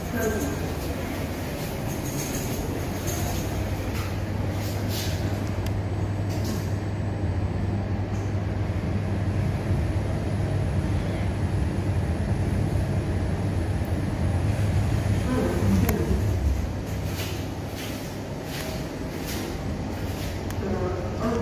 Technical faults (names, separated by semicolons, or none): none